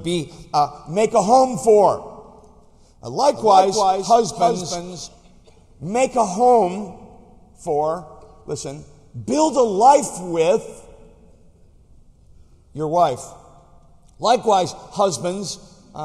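The audio carries a doubled audio track from 3.34 s to 5.08 s: a second full-band copy runs roughly 300 ms behind the original, around 5 dB quieter, dry with no decay, and it cuts in and out abruptly. This is likely a second capture path or an edit leaving two copies out of step.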